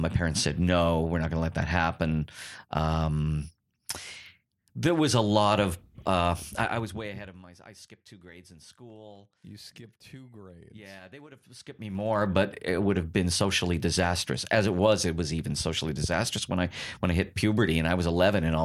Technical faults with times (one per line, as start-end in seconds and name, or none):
6.54-7.44 zipper noise
11.46-12.28 zipper noise